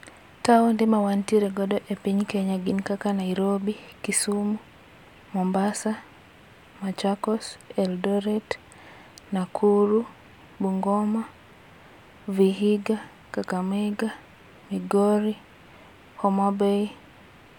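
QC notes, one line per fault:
No faults found in this speech clip.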